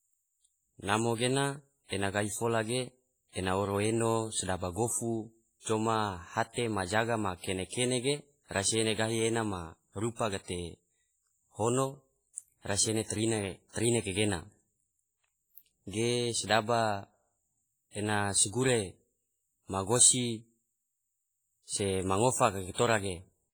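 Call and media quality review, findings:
WMA compression, throughout. Likely a low-rate Windows Media Audio encode; heavy damage fits roughly 24 kbps. Long transform blocks smear quantisation noise over tens of milliseconds and drop weak spectral lines, so the speech rings and sounds washy, with hiss that swells and fades with the signal level.

Pre-echo, three events. Codec block spreads noise sized for a loud attack into the quiet gap ahead of it. 7.69 to 7.72 s, after "hate majaga ma": about 36 ms of hiss before onset. 10.15 to 10.19 s, after "ene gahi ena ma": about 39 ms. 22.73 to 22.78 s, after "ma ngofa": about 49 ms. Each attack sounds softened and smeared.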